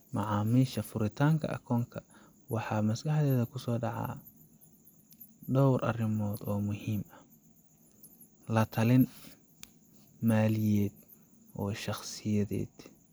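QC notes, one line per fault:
No faults were found on listening.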